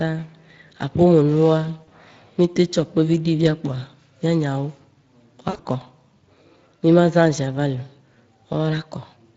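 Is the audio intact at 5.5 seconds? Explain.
No. From 5.49 to 5.68 s, VoIP packets were lost and the speech codec's concealment covered the gaps. About 120 ms of audio went missing, scattered over 160 ms, with the longest run 60 ms, which fits roughly six 20 ms frames. The decoder kept repeating its last pitch and vocal-tract filter at falling gain, so the speech smears into a buzzy tone or a coloured noise that fades. Because each frame builds on the one before it, the speech stays weak or distorted for a while after the packets return.

Underneath this, the whole clip passes through the Speex codec at a rate that points to roughly 20 kbps. This CELP coder spends too few bits on the excitation signal, so at 5.5 s the speech also sounds plainly noisy and hoarse.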